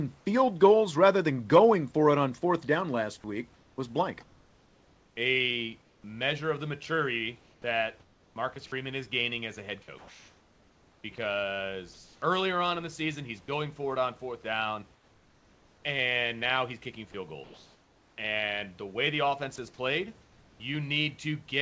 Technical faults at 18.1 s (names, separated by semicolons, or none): sound chopped by the voice detector